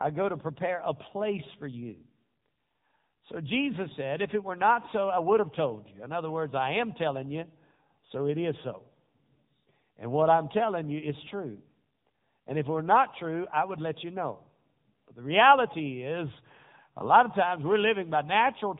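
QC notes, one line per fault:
Throughout: AMR narrowband mobile codec. Nothing above 3.8 kHz passes, and the pulse-driven speech model gives a plainly buzzy, synthetic sound, pointing to a mode near 8 kbps.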